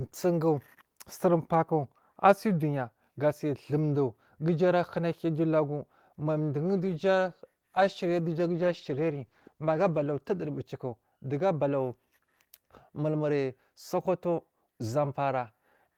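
From 6.58 to 10.75 s, at "dogu abalawu", a call bitrate drop, pointing to 40 to 18 kbps, muffles speech; the spectrogram's top band disappears.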